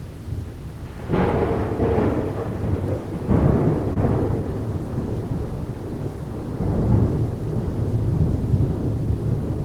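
At 3.93 to 3.98 s there is a short concealed packet loss. About 20 ms of the stream arrived too late for the decoder, and the receiver covered the gap by extending the preceding sound for roughly 24 ms before crossfading back into the real signal. It is heard as a brief smear or wobble. On a spectrogram the harmonics or noise texture smooth out and repeat across that sliver, and the waveform shows a too-regular patch with a soft seam at the rejoin.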